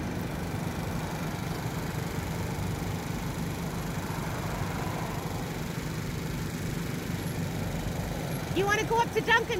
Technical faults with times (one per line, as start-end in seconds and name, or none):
none